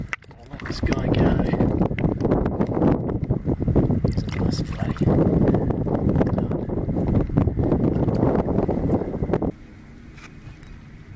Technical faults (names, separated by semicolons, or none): none